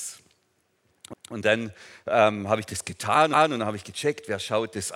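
At 1.13 to 1.34 s and again at 3.33 to 3.54 s, overlapping chunks make the sound stutter: each 2 s chunk begins before the previous one ended, so about 200 ms replays at the join. On a waveform or spectrogram, that 200 ms pattern appears twice, with an abrupt seam.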